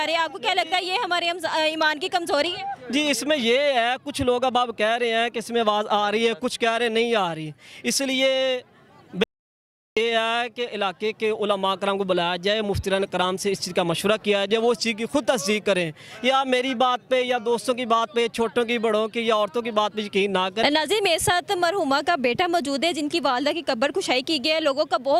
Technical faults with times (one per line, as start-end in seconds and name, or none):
9.24-9.97 audio dropout to silence